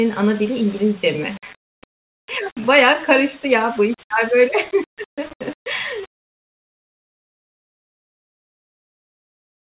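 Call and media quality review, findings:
Low bit depth without dither: grainy, signal-following distortion on speech throughout, error roughly 25 dB below signal. Likely cause: undithered rounding to around 6 bits upstream of the G.711 path, whose 4 kHz band limit cuts off the highs.

Clock drift between sender and receiver: sender clock running about 1.5% slow against receiver, throughout. Jitter buffer steadily draining, forcing receiver to fill the shortfall with repeated audio. Small uneven hiccups recur across the whole clip.

Repeated timing corrections: 0.34 s to 9.61 s, playback effectively at 99% speed. Receiver repeating short segments, all in the same direction, unevenly spaced, adding around 150 ms overall. Heard, if at all, as slight stutters and unsteady speech tempo.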